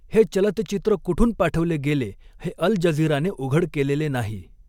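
Nothing stood out on listening to this speech recording.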